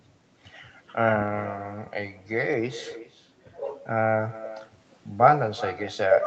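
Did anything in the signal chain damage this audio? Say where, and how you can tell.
Yes. The damage is in the call processing: an echo with no canceller, present throughout the speech. Every phrase returns as a separate copy roughly 0.4 s later, about 15 dB below the direct sound, and thinner. The far end's loudspeaker played the call into its microphone, and nothing subtracted it before it came back across the network. Room reverberation would smear into a decaying tail, but this is a distinct delayed repeat, still band-limited at 8 kHz like the rest of the Opus path.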